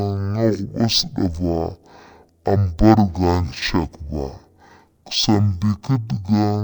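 Throughout, stereo read as mono: interleaved left-right samples play as one channel, so speech runs at half speed, an octave low, with a faint mirrored image filling the spectrogram's upper half.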